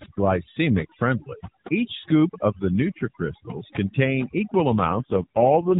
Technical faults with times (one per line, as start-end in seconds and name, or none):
0.00-5.79 overdone noise removal
4.72-5.79 AMR rate drop